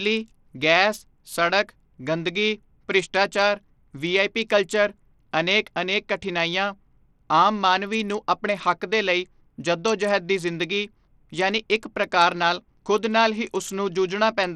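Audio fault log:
Throughout: Bluetooth SBC compression, likely a small bit pool fitting about 80 kbps, starving upper sub-bands so treble flickers out under gritty noise.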